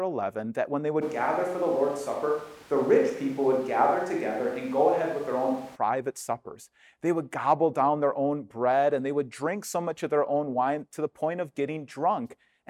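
Right after "that when they", at 1.03 s, the sound suddenly goes roomy and hollow with thinner bass and more room noise until 5.75 s, likely a switch to a distant microphone.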